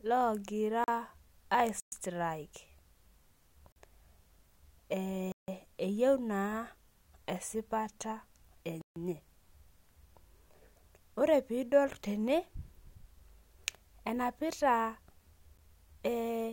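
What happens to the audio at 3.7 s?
Right there the speech drops out into a block of digital silence, running from about 3.72 to 3.76 s, so a 40 ms hole. A run of samples has been replaced by silence, and the signal cuts to nothing and comes back with no fade at either end. At that length it comes across as a short, abrupt gap.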